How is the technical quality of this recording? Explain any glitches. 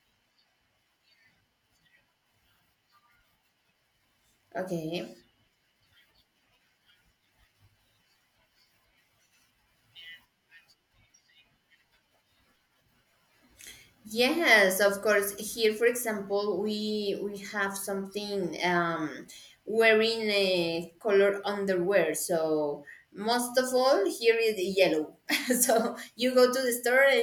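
The recording has no technical glitches to explain. Nothing in the speech points to a fault anywhere in the recording or playback chain.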